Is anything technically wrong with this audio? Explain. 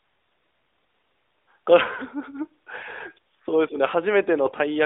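Yes. Near the end, from 4.46 to 4.54 s, there are AMR bit errors. The sound passed through a narrowband mobile codec limited to about 300 Hz to 3.7 kHz. On a poor link, a fair share of its less protected bits arrived flipped. The frames still decoded, but with misplaced excitation pulses and wrong fine detail. The burst keeps roughly its pitch and level but turns briefly hoarse, scratchy and gargly.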